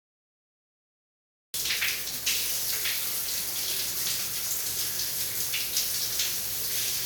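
A cut-off start: digital silence runs to 1.54 s, then the sound begins mid-event. Capture started late, so there is no natural attack or fade-in.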